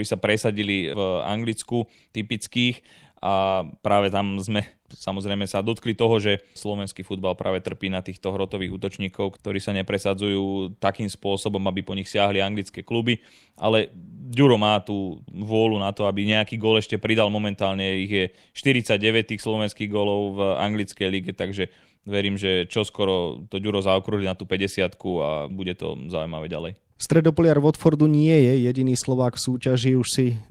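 Lost packets rebuilt from error correction occur at 0.57–0.67 s, 3.43–3.57 s (just before "práve tam"), 5.65 s (after "samozrejme sa"), 6.81–6.87 s, 24.19 s (before "na tú") and 26.49–26.51 s. The speech never drops out. Each missing stretch, lasting 20 to 80 ms and fitting runs of one to four 20 ms packets, was replaced by the low-bitrate copy carried in the following packet. Those moments sound briefly rougher and noisier.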